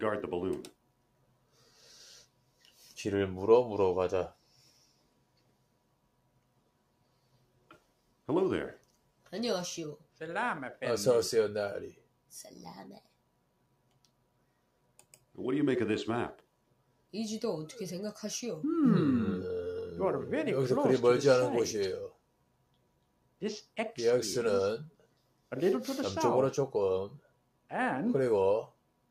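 Sound cut by the noise suppressor occurs at 0.72–2.79, 4.33–10.2, 11.94–15.37, 16.41–17.13, 22.1–23.76, 24.9–25.52, 27.2–27.7 s and from 28.7 s to the end. The suppressor mistook steady or decaying sound for noise, pulling it down by up to about 12 dB. Tails sink and shorten while onsets survive. On a waveform, the envelope drops abruptly after attacks. On a spectrogram, sustained energy thins to patchy gaps.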